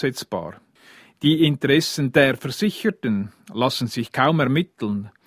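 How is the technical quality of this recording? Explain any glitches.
Nothing to explain here, since there aren't any glitches to be heard anywhere in the recording.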